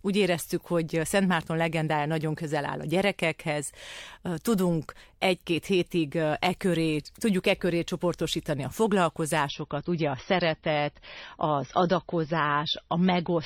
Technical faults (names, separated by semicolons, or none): adaptive stream at a lower bitrate